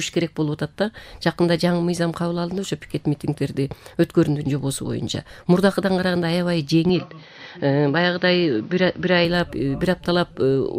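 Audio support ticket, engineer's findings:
Input switched to a poorer device, 6.89 to 9.25 s. Sound goes dull and boxy, nothing above 6.3 kHz, then opens back up. No gap at either switch, level roughly unchanged, but a new noise floor appears, somewhere around 35 dB under the signal. Likely the capture path hopping to a narrower-band mic or a headset call profile and back.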